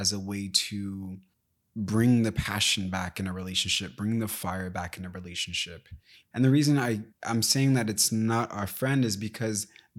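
No technical faults can be heard anywhere in this speech recording.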